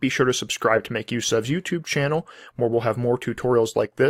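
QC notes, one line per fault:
No faults heard.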